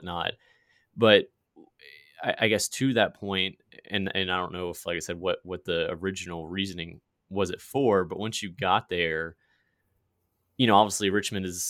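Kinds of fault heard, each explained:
No technical fault is audible anywhere in the recording.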